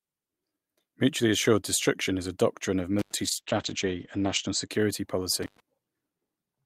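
At 2.99 to 3.14 s, an intermittent contact opens the line for about 92 ms. The speech cuts out with crackle at both edges and faint hiss in the gap, which marks a loose plug or cable rather than a clean digital dropout.

From 3.25 to 4.75 s, a call bitrate drop makes the speech rough and muffled, with the top end cut to 8 kHz for about 1.15 s. That fits the encoder falling from around 40 to 10 kbps. The sound degrades but never goes silent.

At 5.43 to 5.6 s, a second intermittent contact cuts the sound for about 107 ms, again with crackle at the edges.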